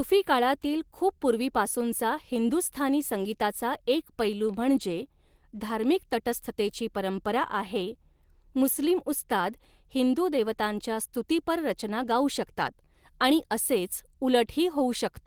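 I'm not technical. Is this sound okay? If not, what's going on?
Yes, nothing in this speech recording points to a technical fault.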